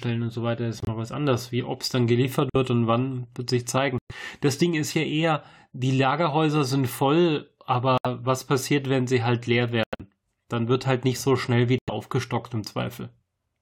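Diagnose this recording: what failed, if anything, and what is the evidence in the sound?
The codec stage failed here, in the form of corrupt frame muted. The speech drops to dead silence abruptly at 0.80, 2.50, 3.98, 7.98, 9.83 and 11.78 s, with holes lasting roughly 0.06 to 0.18 s, which fits a few whole compressed frames going missing each time. Damaged frames were rejected by the decoder and the player filled the gaps with silence. Nothing around the holes shifts, so timing holds.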